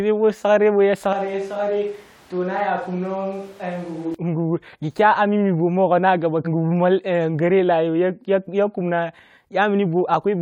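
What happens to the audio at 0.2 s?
Nothing goes wrong at 0.2 s; the audio plays through intact there.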